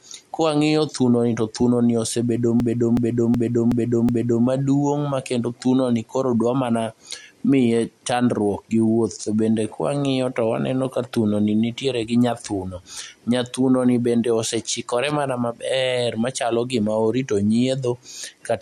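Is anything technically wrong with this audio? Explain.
Yes, two faults.

System hang loop, 2.60 to 4.46 s, after "to thunoni osebedo": the audio system stalled while the hardware kept replaying one 0.37 s buffer five times, a stutter at 2.69 Hz, which fits a 16384-sample buffer. It resumes with "maduong' makendo thunoni koro".

Loud pop, 15.10 to 15.13 s, between "bende osechikore" and "mana maber machalo gima": a single sharp pop about 10 dB above the speech, likely from a sudden voltage step added to the signal.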